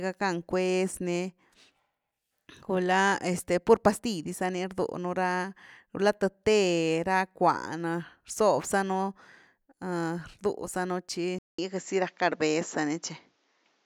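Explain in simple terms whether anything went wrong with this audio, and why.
Something changes at 11.39 seconds. The speech goes quiet for about 0.2 seconds, then comes back duller and boxier, and stays that way to the end. Nothing above about 7.6 kHz gets through after that point, so the crisp top of the sound is gone. The level shifts a little, and a faint new background hiss appears. The likely cause is an input switched to a poorer device, such as another microphone or a headset, partway through recording.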